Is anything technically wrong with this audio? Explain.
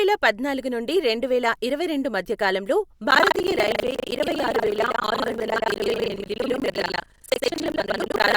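Yes. From 3.08 s to the end, buffer tearing: writer and hardware reader have slipped, so about two fifths of each 40 ms period replays audio roughly a tenth of a second old, causing a robotic 25 Hz buzz over the speech.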